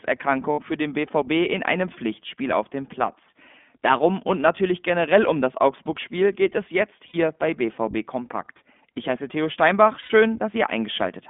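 The whole speech clip runs through the iLBC codec, whose 20 ms framing points to its 15.2 kbps mode, inside a line band of about 200 Hz to 3.5 kHz. Everything above that is gone, and each frame's excitation is coded on its own, so the voice sounds plainly rough and slightly synthetic.

Lost iLBC frames occur three times. The decoder fills each gap by repeating the last pitch cycle blended with noise. The first is at 0.52 to 0.62 s, just before "für den". The second is at 7.08 to 7.16 s, right after "geht es jetzt"; both losses fit about three 20 ms frames. The third, at 10.00 to 10.11 s, fits roughly five frames. Each gap sounds like a brief held, buzzy vowel, and clean speech returns almost immediately because every frame decodes independently.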